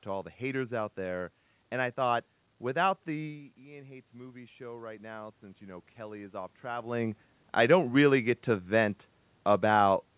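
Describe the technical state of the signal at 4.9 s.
At 4.9 s the voice and the room noise are swelling up together, as automatic gain rising runs from 3.17 to 6.97 s: the talker's level dropped by about 15 dB near 3 s, so the gain control slowly lifts everything by about 9 dB.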